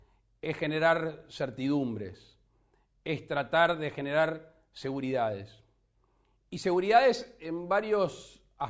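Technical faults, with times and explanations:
Nothing stood out on listening.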